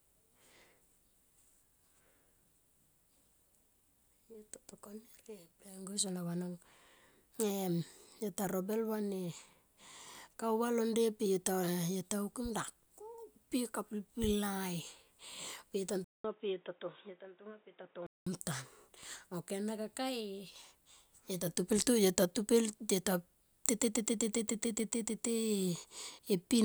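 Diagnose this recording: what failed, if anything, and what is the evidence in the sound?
The fault sits at the driver and device-selection stage. At 16.04 s the speech drops out for about 0.2 s. It then returns dull and boxy, with nothing above 3.8 kHz. A new, faint noise floor appears, about 35 dB below the speech, with no clear jump in level. Full bandwidth comes back at 18.27 s. The likely cause is an input switched to a poorer device, such as a headset's narrowband call profile, and then switched back.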